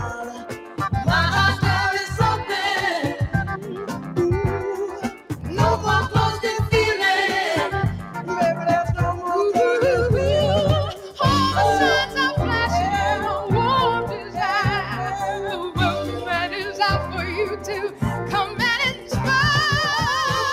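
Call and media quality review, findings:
Noise suppressor applied to music or sounds, whole clip: speech-tuned suppressor treating sustained content as noise, gain swinging around 10 dB. Waveform pumps; spectrogram shows attacks intact, sustains and tails fading early.

Sound cut by the noise suppressor at 0.19–0.79 s, 3.57–4.14 s, 4.88–5.37 s, 8.02–8.3 s, 10.93–11.2 s and 14.1–19.13 s: drops of about 6 to 10 dB, deepest late. Shows as envelope dips and darkened spectrogram bands.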